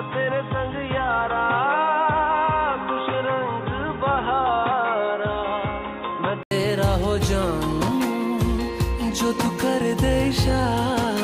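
Input switched to a poorer device, from the start to 6.51 s: for this stretch nothing is heard above 3.8 kHz, so the sound is dull and boxy, with a faint added noise floor well below the signal. At 6.51 s an 80 ms silence precedes a sudden return to full brightness with no obvious level jump. This points to the recording likely starting on a narrower-band input, such as a headset's call profile, before switching to the better device.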